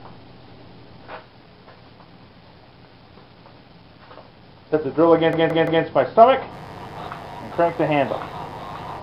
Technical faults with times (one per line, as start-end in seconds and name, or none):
5.33-5.84 repeated frames
6.49-9.02 mains buzz